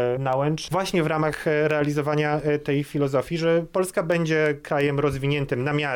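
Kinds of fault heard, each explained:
Word clock ticks, from 0.33 s to 5.84 s: a digital link is being read by a receiver running on its own clock rather than locked to the sender's. Each time the two clocks slip past each other, a single sample is dropped or repeated and a few around it are misread. Here that yields around fifteen sharp ticks at a steady spacing of roughly 0.3 s, which points to a clock mismatch on the order of 70 parts per million.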